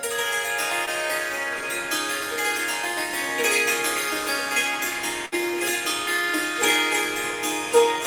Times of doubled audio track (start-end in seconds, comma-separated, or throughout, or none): 6.56-8.06